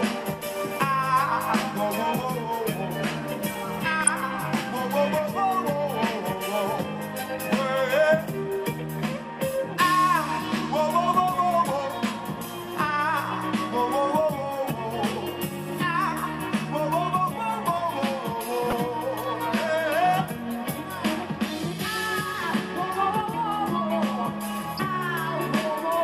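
From the start the sound is dull and gurgling, with a granular edge. This is MP2 compression, likely at a rate near 80 kbps. Starved sub-bands switch off, so a spectrogram shows a ragged ceiling with upper bands flickering in blocky patches.

DAB burbling breaks through from 3.91 to 4.12 s and again from 18.70 to 18.76 s as short blips of noise. Corrupted data puts these blips into single sub-bands. These show as isolated bright rectangles on the spectrogram and brief spiky bursts in the waveform.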